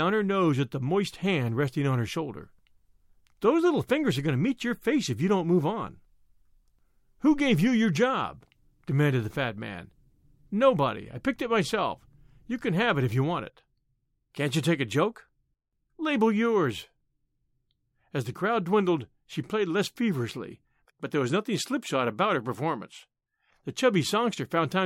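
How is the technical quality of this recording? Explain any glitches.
No technical faults are audible.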